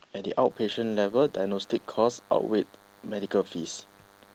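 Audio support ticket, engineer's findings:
DECT cordless phone buzz, 0.50 s to end of clip. A DECT handset or base near the audio circuit is sending 10 ms radio bursts that the circuit rectifies. The result is a steady, thin 100 Hz buzz with dense harmonics, about 30 dB under the speech.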